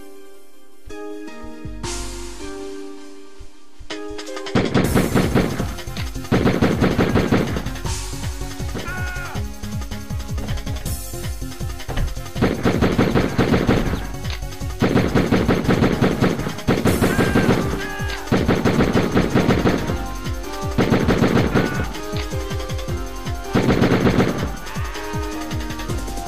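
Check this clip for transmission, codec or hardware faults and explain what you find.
No faults found; nothing to report.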